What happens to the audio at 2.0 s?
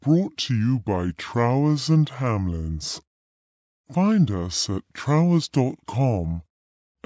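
At 2.0 s, as throughout the clip, the speech suffers a wrong sample rate: playback runs at 0.667 times speed, roughly 7 semitones lower, which fits 24 kHz audio played at 16 kHz.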